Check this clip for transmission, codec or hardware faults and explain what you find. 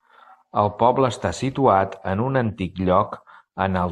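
Checking the clip turns up no faults to explain.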